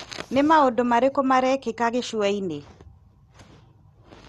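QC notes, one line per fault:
Throughout, MP2 compression: the speech sounds dull and carries a gurgling, granular roughness, with nothing above about 12.2 kHz. This is likely MPEG Layer II coding at a low rate, consistent with around 64 kbps. That codec divides the spectrum into 32 equal sub-bands and, starved of bits, shuts off the upper ones and coarsely quantises the rest, so bands flicker in and out and leave that watery, grainy texture.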